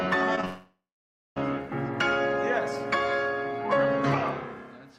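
Right near the start, at 0.35 to 0.39 s and again at 0.41 to 0.45 s, there are two bits of short concealed packet loss. Each is about 20 ms of audio that didn't get to the decoder in time, so the receiver patched the gap by carrying on the previous sound and then blending back into the real signal. You hear them as quick little smears.

Straight after the second one, from 0.45 s to about 1.38 s, the sound drops out for nearly a second, which is most likely a long network dropout. It starts with the receiver stretching out the last bit of sound into a buzzy or hissy tail that fades away, and for roughly the last half second there's just silence. When the audio returns at 1.38 s it picks up further along, and the section in between is gone for good.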